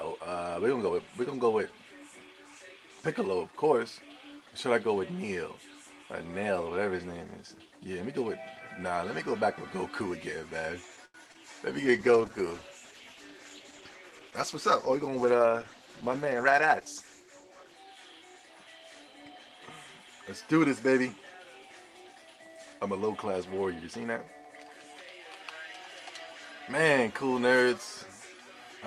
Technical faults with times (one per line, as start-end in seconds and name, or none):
11.05-11.16 short stall from a late packet
11.32-11.36 short concealed packet loss
11.86-17.84 call bitrate drop
11.91-12.31 jitter buffer slow-down
14.27-15.65 jitter buffer speed-up